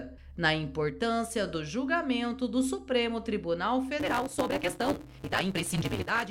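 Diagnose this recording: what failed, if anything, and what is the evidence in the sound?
From 3.99 s to the end, a 188 Hz buzz sits over the sound, which runs 1.88 times fast at normal pitch. This is a block size mismatch (truncated) at the buffer stage: blocks arrive longer than the 256-sample reads this suggests, so each tail is dropped.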